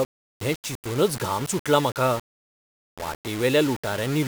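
From start to end, the speech carries grainy distortion that shifts with the voice. Quiet passages turn gritty. This is likely low bit depth without dither: rounding to about 5 bits, leaving error only about 15 dB below the signal.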